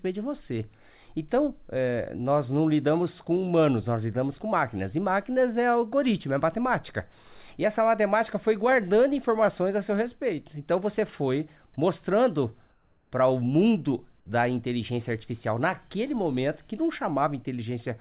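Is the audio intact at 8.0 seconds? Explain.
Yes, the audio at 8.0 seconds is intact, with no dropout, glitch or other fault at that moment.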